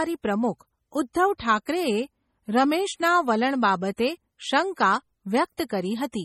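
MP3 compression runs through the whole clip: the speech sounds watery and swirly, with nothing above 18 kHz. Weak frequency lines flicker on and off between frames. The heavy damage fits a starved encoder, likely MP3 at a low bitrate around 32 kbps.

Pre-echo precedes attacks at 1.13, 1.65, 3.97, 5.57 and 5.69 s. Before each one comes a short hiss lasting 12 to 19 ms. The codec spread its quantisation noise across the whole block, so noise sized for the loud onset leaks into the quiet moment before it, softening each attack.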